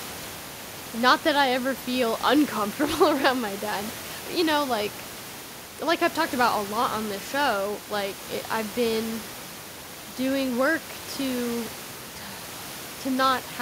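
No technical faults occur anywhere in the recording.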